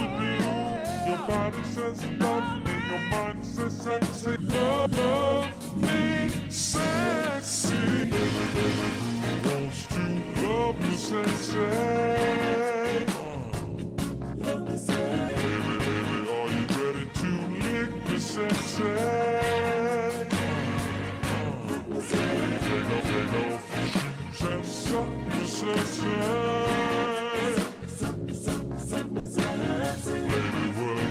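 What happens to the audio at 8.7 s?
GSM signalling bursts, 7.28–9.42 s: a nearby phone's radio bursts, rectified, give a galloping dit-dit-dit of 217 Hz buzz, seen as clustered harmonic stripes.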